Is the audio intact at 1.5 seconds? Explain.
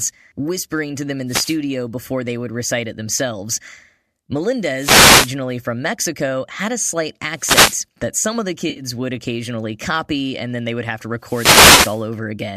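No. From 1.27 to 1.58 s, between "whispering to them in" and "before they would recite", there is a wireless microphone noise hit. The analogue FM radio link fades as reflected signals cancel, so receiver noise surges up over the speech and is heard as a brief swish of static. Unlike a digital dropout, the sound isn't cut to silence or repeated; hiss rises and recedes around it, without the grainy, steady texture of codec damage.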